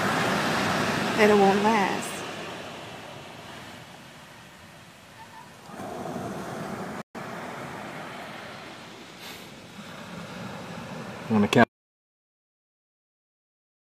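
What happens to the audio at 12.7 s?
At 12.7 s the clip is in the middle of an audio dropout to silence that begins at 11.64 s and runs to the end. The input signal was likely lost, through a disconnected source, a broken link or an accidental mute, while the recording carried on storing silence. The sound stops abruptly at 11.64 s, and from there the audio is silence with no room tone or background. Whatever was happening after that point is missing.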